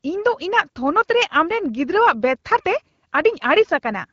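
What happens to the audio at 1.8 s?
Nothing goes wrong at 1.8 s: the speech carries on intact through that moment, clear under the light coding of a wideband AMR-WB link at 12.65 kbit/s.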